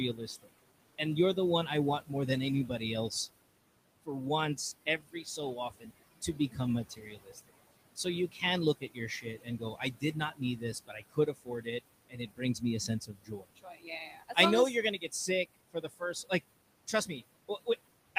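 Noise suppressor artifacts run the whole way through: it pulls the room noise, which sits about 15 dB under the speech, down by about 20 dB between phrases, so the background pumps. The suppressor also cuts into the speech itself, mistaking quieter bits for noise and dropping them by about 20 dB. That happens briefly from 0.14 to 2.11 s, heavily from 4.04 to 14.37 s, where roughly four seconds sound swallowed, again from 14.98 to 16.31 s just after "you're gonna", and lightly, by about 12 dB, from 16.87 to 17.67 s.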